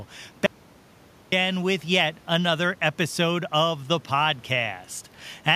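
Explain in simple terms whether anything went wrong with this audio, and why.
Audio dropout to silence, from 0.46 to 1.32 s: the speech stops dead for almost a second and then resumes mid-flow. Even the faint room noise vanishes, leaving pure silence. The likely cause is the input briefly disconnecting while the recorder kept writing blank audio, so that stretch of speech is lost.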